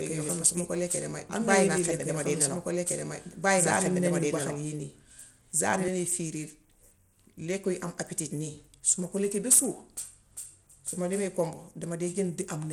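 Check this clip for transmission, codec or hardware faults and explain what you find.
Two faults are audible: a doubled audio track over the first part of the clip, and Bluetooth SBC compression throughout.

From the start until 5.88 s, a doubled audio track is present. A second copy of the same audio, likely from a slower capture path or an out-of-step edit, is mixed in about two seconds behind the original at roughly equal level. It is already running when the clip begins and cuts off abruptly at 5.88 s. The delayed copy is full-band, with no decay or room colour, so the speech is overlaid with a clean replay of itself.

Throughout the clip there is Bluetooth SBC compression, likely from a Bluetooth link using a small bit pool. The damage fits a rate of around 96 kbps. SBC splits the signal into a few wide sub-bands and allocates bits without a hearing model, so the weak upper bands are starved while the rest is coarsely quantised. 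The result is plainly audible: the treble drops out and flickers, and a gritty, aliased noise rides on the speech.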